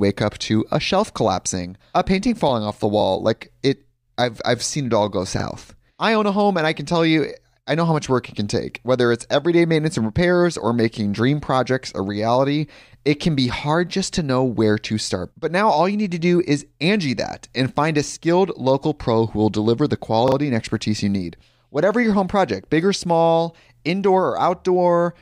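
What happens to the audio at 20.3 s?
A repeated buffer occurs from 20.28 to 20.36 s. New audio arrived late, so the same 40 ms piece plays twice more, heard as a brief stutter.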